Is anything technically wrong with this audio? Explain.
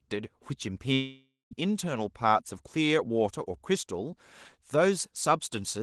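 Yes. A long network dropout runs from 0.93 to 1.53 s, likely caused by audio packets not arriving. The receiver extends the last sound as a fading buzz or hiss, then about 210 ms of silence, and the lost section never returns.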